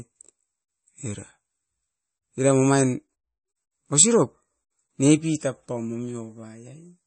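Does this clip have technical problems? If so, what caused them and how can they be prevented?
Yes. Throughout the speech, nothing is heard above 8.4 kHz, and there is a plainly audible watery, swirly quality with smeared attacks. This is likely MP3 compression at a low bitrate, fitting something near 31 kbps, where the encoder cuts the treble and drops weak frequency lines that flicker on and off from frame to frame. On a spectrogram this shows as a hard ceiling at 8.4 kHz with patchy, blinking gaps in the quieter bands below it. Encoding at a much higher bitrate, or keeping an uncompressed master, would prevent it.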